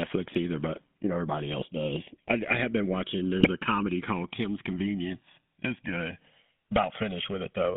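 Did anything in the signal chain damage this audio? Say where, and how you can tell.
Yes. The two channels are drifting apart at the converter stage, likely from separate device clocks differing by roughly 200 ppm. The delay creeps to around 1.5 ms, so mono sums flange, with comb notches sliding slowly across a spectrogram.

A GSM full-rate codec is active throughout. The band runs only from 150 Hz to 3.5 kHz, which fits the 13 kbps GSM full-rate codec. The speech has a buzzy, gravelly roughness, and a spectrogram shows a hard ceiling with coarse harmonics.

GSM bit errors on the radio link hit from 3.4 to 3.49 s, between "I have been watching" and "a comedy called". Squawks and gargling point to a few corrupted frames, visible as level spikes in the waveform and smeared bursts on a spectrogram.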